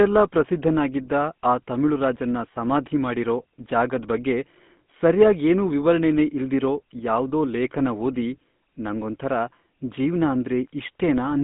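From start to finish the speech carries GSM full-rate codec damage, plainly audible as a buzzy, gravelly roughness, consistent with the 13 kbps full-rate mode. The codec rebuilds the voice from a vocal-tract model driven by sparse, regular pulses, so fine excitation detail is lost. The band runs roughly 150 Hz to 3.6 kHz. On a spectrogram, energy stops flat near 3.8 kHz, and the harmonics look smeared and grainy rather than cleanly striped.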